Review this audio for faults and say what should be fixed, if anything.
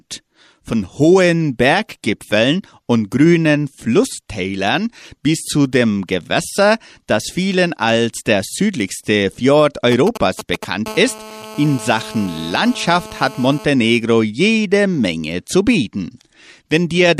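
From 9.92 to 10.65 s a galloping dit-dit-dit of short buzzes cuts across the speech, fairly loud at roughly 10 dB below it. These are GSM signalling bursts. A nearby 2G phone was exchanging brief control transmissions with the network, and the audio circuitry rectified each group of radio pulses, turning their 217 Hz framing into audible clusters. Keep mobile phones well away from microphones, cables and preamps, or switched to flight mode, during recording.

Between 10.86 and 13.65 s a hard, raspy, steady buzz at 217 Hz sits under the speech at about 17 dB below it, rich in harmonics and unrelated to anything being said. This is GSM phone buzz. A 2G phone in an active call was transmitting a burst 217 times per second, and the rectified pulse train came through as a continuous tone. Shielded, balanced cabling and keeping handsets at a distance from the recording chain prevent it.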